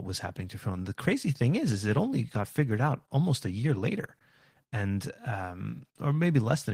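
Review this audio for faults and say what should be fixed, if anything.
Opus voice compression is starved of bits throughout: the hybrid SILK-plus-CELT coder quantises the excitation coarsely, leaving the speech audibly hoarse and slightly robotic, which fits roughly 16 kbps. To prevent it, encode at a higher Opus bitrate, around 32 kbps or more for speech.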